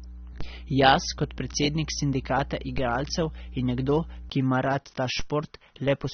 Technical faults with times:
0.00-6.13 AAC compression
0.00-4.30 mains hum
0.41 DC step
2.78 DC step
5.20 DC step

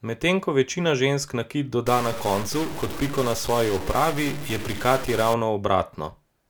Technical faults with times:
1.86-5.34 stuck bit

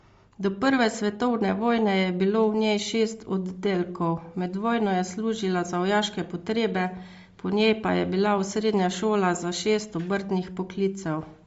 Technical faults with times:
0.00-11.47 Bluetooth LC3 compression

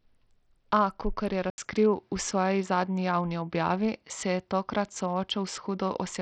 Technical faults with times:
0.00-6.22 Bluetooth SBC compression
1.50-6.22 input switched to a poorer device

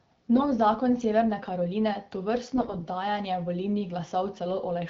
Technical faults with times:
0.36-0.43 AMR bit errors
2.54-2.83 AMR bit errors

